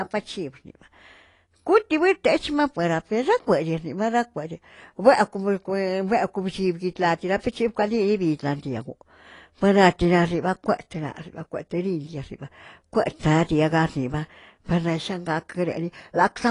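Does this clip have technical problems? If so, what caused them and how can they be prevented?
Yes. AAC compression runs throughout: the speech sounds dull and smeared, with nothing above 10.5 kHz and a fizzy, warbling edge on sibilants. This is likely a low-bitrate AAC-LC encode, which fits about 32 kbps, where the encoder trimmed the top band and coarsely quantised the rest. Encoding at a higher bitrate, or keeping a lossless master, would prevent it.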